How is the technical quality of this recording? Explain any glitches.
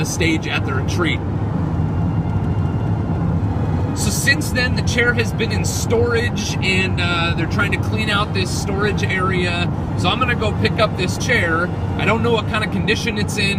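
Nothing here sounds like a glitch, so there's no fault to point to or explain.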